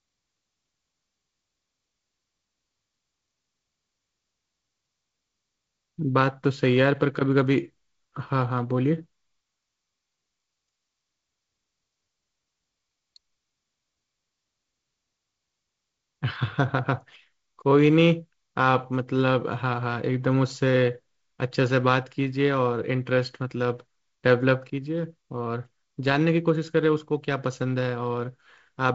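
No faults can be heard anywhere in this speech.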